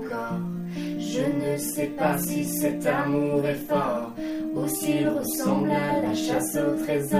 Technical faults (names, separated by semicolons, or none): none